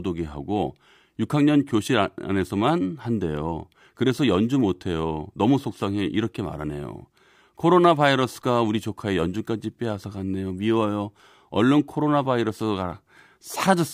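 A speech recording whose signal shows no audible technical faults at any point.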